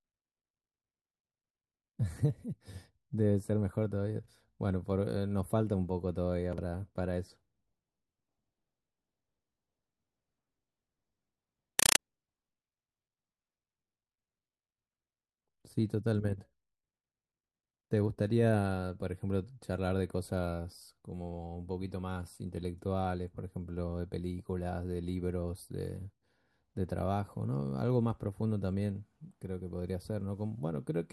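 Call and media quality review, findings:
Compressed stream played as audio, 11.79 to 11.99 s: loud chattering static replaces the speech for about 0.2 s. Bursts repeat at 31.25 Hz, each about 5.3 ms of noise then silence. This pattern points to an AC-3 bitstream on the digital output going out undecoded as PCM. Check the passthrough/decode setting on the output path.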